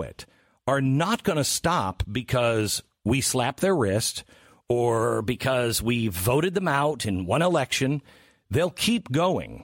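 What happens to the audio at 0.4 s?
Nothing goes wrong at 0.4 s; the speech is intact there, with no dropout, click, distortion or other fault at that moment.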